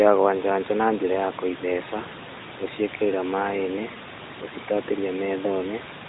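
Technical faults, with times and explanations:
No technical faults detected; the room noise, about 14 dB below the speech, belongs to the recording, and the 4 kHz ceiling of the AMR-NB phone path at 12.2 kbps is how that channel normally sounds.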